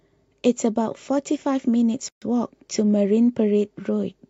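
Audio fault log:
2.09–2.22 s, gap at a join of encoded pieces: separately encoded pieces were joined without trimming the encoder's start delay and last-frame padding, so a 132 ms gap breaks the continuous speech, its edges smeared by the codec so the silent part is shorter, before the speech resumes where it stopped.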